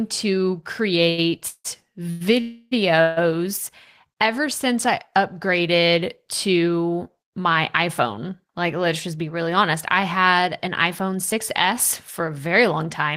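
At 1.09 to 1.25 s there is a short stall from a late packet: a packet arrived behind schedule, the jitter buffer ran dry, and the receiver held the last sound for about 84 ms before resuming at the same point. The result is a sustained, faintly buzzy syllable with no audible gap. That separates it from the freezes that follow, where the fill is longer and decays toward silence.

Four call audio freezes come next, at 1.48 to 1.66 s, 2.10 to 2.22 s, 2.40 to 2.73 s and 3.01 to 3.19 s. They fill about 161, 100, 309 and 153 ms. Each time the speech stops and a smeared continuation of the last sound fades out. In the first freeze it reaches about 60 ms of silence. The speech then picks up where it left off, so the gap is inserted rather than replacing anything. The likely cause is packets held up in transit emptying the jitter buffer. These freezes are longer and hollower than the stall.

From 8.84 to 11.63 s, ending just before "for a very", a jitter buffer speed-up plays the speech about 6% fast. 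The receiver trimmed tiny pitch-period slices over and over to shed roughly a fifth of a second of backlog. The speech sounds slightly hurried, but the pitch stays put, which distinguishes this from a playback-rate error that would raise the pitch.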